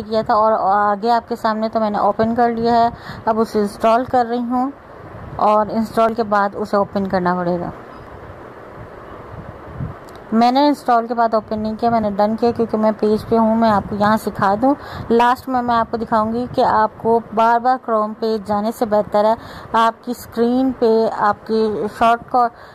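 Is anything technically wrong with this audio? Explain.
Yes, there's an overlap between stream segments fault. Tiny skips land at 2.12, 4.10, 6.09, 8.07, 10.05, 12.04, 14.04 and 16.02 s, about every 2 s, matching the segment length. Overlapping timestamps make the player trim a few milliseconds, so the waveform jumps.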